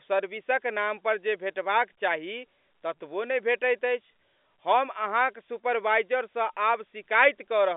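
A speech recording heard through G.711 telephone coding, with nothing technically wrong with it.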